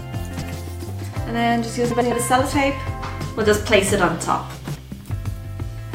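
Frames out of order occur at 0.31–0.53 s, 1.90–2.12 s and 4.54–4.76 s. Each time, two adjacent 0.1 s blocks play swapped, producing a garbled flutter. The spectrogram and waveform show three abrupt seams, with the envelope's halves exchanged.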